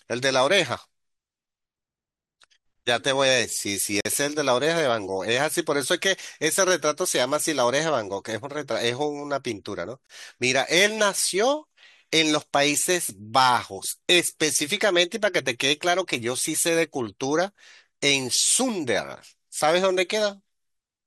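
A speech recording with two gaps between stream segments, one from 4.01 to 4.05 s (46 ms) and another at 10.07 to 10.10 s (about 28 ms). Adjacent segments' timestamps don't meet, so the player pads the hole with silence while all the audio is kept. The two gaps sit 6 s apart, which points to 6-second segments. On a waveform each shows as a flat, hard-edged break, and on a spectrogram as a clean vertical blank band.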